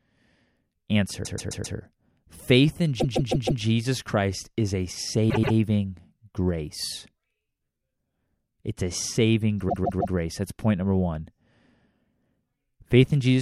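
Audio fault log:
1.24–1.77 s, 2.99–3.62 s, 5.29–5.55 s, 9.68–10.15 s: repeated frames. The same 130.6 or 156.7 ms block of speech replays two to four extra times, a stutter. Spectrograms show identical patches tiled side by side.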